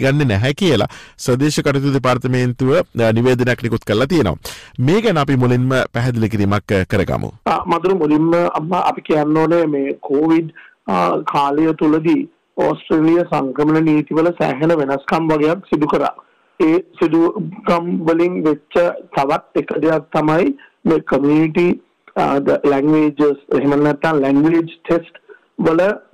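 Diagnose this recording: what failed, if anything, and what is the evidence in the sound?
Hard clipping throughout: about 11 dB of overdrive at the converter or format stage flattens peaks on roughly a tenth of samples, adding harsh high harmonics.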